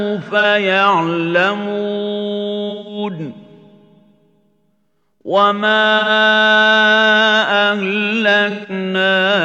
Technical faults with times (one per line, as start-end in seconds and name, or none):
0.39-0.43 AAC frame loss with concealment
2.69-2.98 AAC frame loss with concealment
5.98-6.09 AAC frame loss with concealment
8.50-8.70 AAC frame loss with concealment